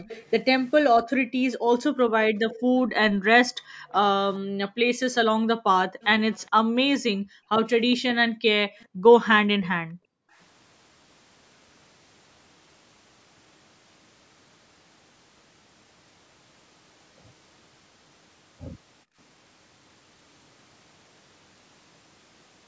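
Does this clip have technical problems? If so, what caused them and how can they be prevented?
Yes. Echo leak appears at 0.0–0.82 s, 2.35–4.35 s and 6.01–9.66 s: a faint copy of the speech trails 416 ms behind, roughly 20 to 30 dB down. This is likely from a loudspeaker's output reaching the far microphone past an incomplete echo canceller. On a spectrogram it shows as weaker, shifted duplicates of the speech harmonics. Using a headset on the far end, or lowering speaker volume, prevents it.

Background gated by the echo canceller occurs between 1.24 and 10.38 s, about two seconds in total, dropping up to about 40 dB, and again at 19.05–19.17 s, about 28 dB. The canceller clamped the microphone while the loudspeaker played, so the room noise vanishes briefly. On a waveform the noise floor shows sudden notches to near silence. A headset, or a canceller with gentler suppression, would prevent this.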